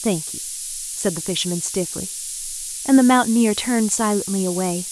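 From start to finish, a steady, thin hiss sits over the speech, bright and concentrated toward the top of the band, and only around 10 dB below the speech itself. It is low bit depth with noise shaping: the audio has been reduced to just 6 bits, and the resulting rounding error has been fed back so that it is pushed upward in frequency, leaving the lows cleaner but piling hiss into the treble.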